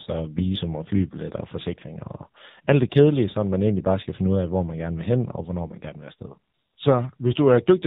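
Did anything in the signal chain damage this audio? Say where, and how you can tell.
Yes. The AMR narrowband mobile codec (AMR-NB) has damaged the speech at the codec stage, across the whole clip. Nothing survives above 4 kHz, so consonants lose their hiss, and the voice has a heavy, buzzy, synthetic quality that fits one of the low modes around 6.7 kbps. At that rate, each 20 ms frame is rebuilt from a vocal-tract filter driven by only a few pulses per 5 ms subframe, so natural texture is lost.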